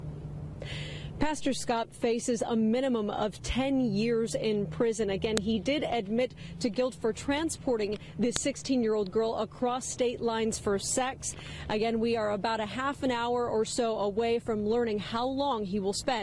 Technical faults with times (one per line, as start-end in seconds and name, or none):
5.37 file header played as audio
8.36 file header played as audio